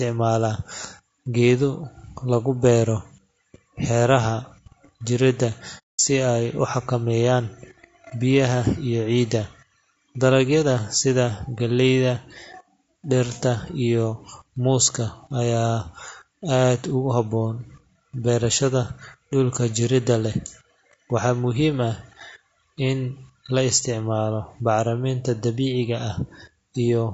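Speech runs through the whole clip with a rough, grainy texture, noise filling the gaps between pitch harmonics and a thin, somewhat synthetic top band. This is plainly audible damage from low-delay AAC compression, likely AAC-ELD at a rate that fits about 32 kbps. From 5.78 to 6.00 s there is an AAC frame loss with muting, a hole of about 210 ms, consistent with seven consecutive frames being dropped and the decoder zeroing their spectrum. The sound fades out and back in over roughly a frame's length at each edge. That soft-edged silence distinguishes it from a hard dropout, which would snap off abruptly, and from concealment that repeats or smears the preceding sound into the gap.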